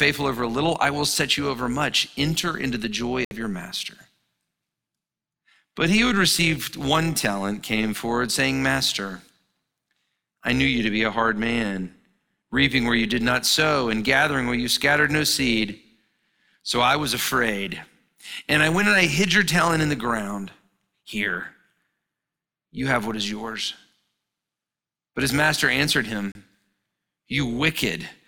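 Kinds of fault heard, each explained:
overlap-add ripple: Windowed frames were rejoined with an uneven overlap gain, so the speech level pulses by about 6 dB at around 200 Hz, giving a metallic buzz with extra tones around the voice.
digital broadcast dropout: The receiver lost good frames and muted until valid ones returned, cutting the speech to silence for 64 ms at 3.25 s and 32 ms at 26.32 s.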